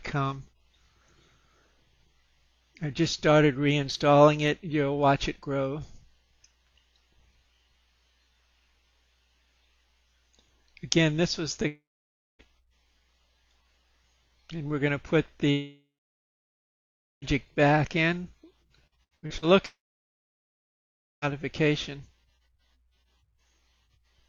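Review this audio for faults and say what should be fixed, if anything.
Three long network dropouts show up at 11.67 to 12.42 s, 15.51 to 17.25 s and 19.66 to 21.25 s. In each one, the last bit of sound gets stretched into a fading buzz, then it goes quiet: about 0.6 s of near-silence in the first gap, about 1.4 s in the second and about 1.5 s in the third. When the audio picks up again, roughly 0.7 s, 1.7 s and 1.6 s of material is simply gone. That's likely the network stalling long enough that the receiver ran out of packets and gave up concealing. A bigger jitter buffer alone won't fix stalls this long, so check the link's stability and consider retransmission or redundancy.

Repeated packet loss (robotic sound) hits from 18.87 to 19.45 s, just before the third dropout. You hear about five quick breaks, the longest around 79 ms. Each is patched by repeating the last sound, and nearly half that stretch (about 47%) is patched rather than real audio, which gives it that choppy edge. 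Turning on forward error correction and giving the jitter buffer a little more headroom should smooth over bursts like this.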